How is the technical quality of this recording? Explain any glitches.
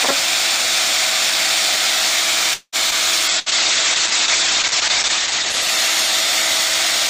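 The recording has four glitches, all from about 2.5 s onward, and they stack up pretty closely.

At 2.53 to 2.76 s there's a call audio freeze. The sound smears into a fading buzz or hiss for about 190 ms, and the last 60 ms or so go silent. This is likely packets stalling in transit until the jitter buffer drained, with the receiver stretching out the last bit it had. When things resume nothing is lost, but the audio now runs about 0.19 s later than before.

At 2.91 to 2.94 s comes a skip ahead. Playback jumps forward with almost no gap, and something like 70 ms of audio is simply gone, so the two sides butt together abruptly. That's what you get when audio gets dropped to catch up while later material is already queued. Here it claws back roughly 50 ms of the delay the freeze added.

From 3.33 s to the end there's a call bitrate drop. The encoder went from 128 kbps down to 9 kbps, and it sat at that floor for about 1.8 s. 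At that rate the coding gets coarse and the top end is cut from 20 kHz down to 8 kHz. So the sound turns muffled and a bit rough and watery, and it stays that way through the rest of the clip.

At 3.39 to 3.49 s, just inside that degraded stretch, there's a burst of packet loss. A short run of packets never arrived in time. The receiver papered over it with about 66 ms of the previous sound, turned down as a held buzz or fading hiss, and then picked up further along. Around 60 ms of real audio is missing across that join.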